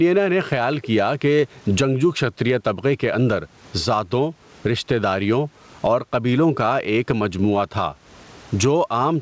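Gain set far too high, with a fast limiter likely clamping it on every loud syllable, makes this speech recording pump throughout. The gain swings by around 15 dB, squashing the level differences. The faint room noise sits about 43 dB below, and nothing is heard above 8 kHz, which fits a G.722 call codec at 64 kbps.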